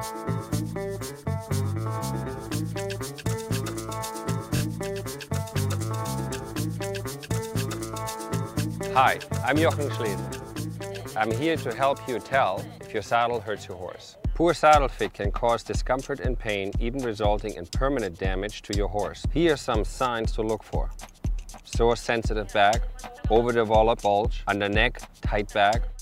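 At 4.55 s a short stutter marks repeated frames: one block of about 23.2 ms is played twice more, pushing everything after it 46.4 ms later. The decoder received the same compressed segment again and decoded it each time, so a tiny fragment loops. On a waveform, identical 23 ms shapes sit side by side up to 4.60 s; a spectrogram shows the same narrow slice copied.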